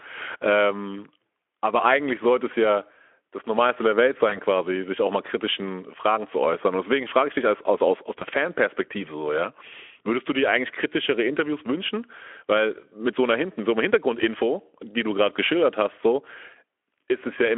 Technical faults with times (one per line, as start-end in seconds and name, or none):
4.29-4.38 VoIP packet loss concealed by the speech codec
8.19-8.24 VoIP packet loss concealed by the speech codec